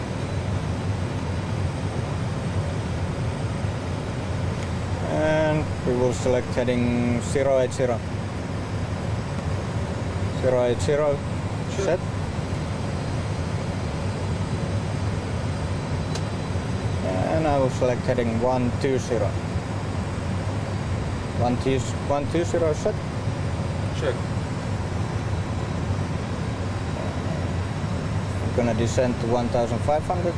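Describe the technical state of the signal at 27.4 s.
At 27.4 s the signal is intact, with no dropout, clipping, glitch or other technical fault to be heard.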